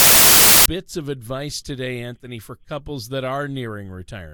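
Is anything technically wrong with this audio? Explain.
Yes. From 0.00 to 0.66 s, file tags are played as audio: an embedded cover picture, stored as compressed image data, is read by the player as if it were sound samples. Because that data is effectively random, it comes out as a very loud burst of white-noise static with abrupt, hard edges before the speech begins.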